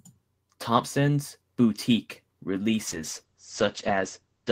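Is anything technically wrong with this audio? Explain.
Yes. From 2.88 s to the end, there's a call bitrate drop: the encoder falls from 32 to 10 kbps and cuts the top end from 20 to 8 kHz, so the speech turns coarse and muffled.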